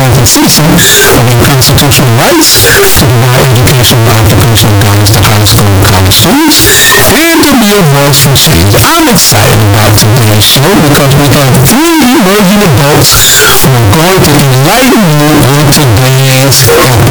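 From start to finish the speech is buried under extremely loud, harsh distortion, and the pauses between phrases are as loud as the talking, with no quiet anywhere. The likely cause is a signed and unsigned mix-up in the 16-bit samples, flipping the top bit so every zero crossing leaps across the full range. Unlike ordinary clipping, which only flattens peaks and leaves soft passages clean, this fault fills even the silences.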